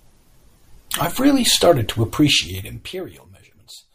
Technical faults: zipper noise

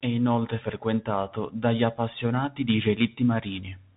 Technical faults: Bluetooth CVSD headset codec

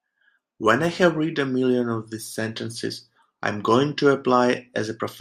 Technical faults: none

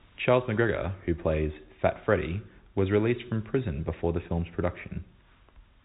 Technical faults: none

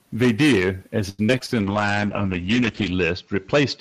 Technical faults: repeated packet loss (robotic sound); call bitrate drop

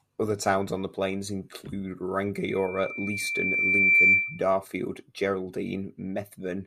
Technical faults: loudspeaker feedback squeal

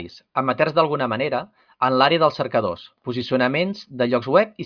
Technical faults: none

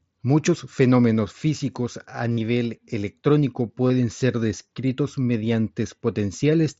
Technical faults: concealed Bluetooth headset packet loss

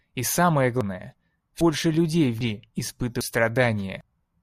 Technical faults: audio missing between chunks

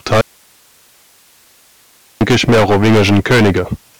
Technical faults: hard clipping; audio dropout to a faint residue

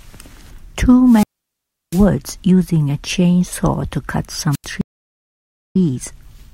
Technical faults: wireless microphone squelch dropout; stream reconnect

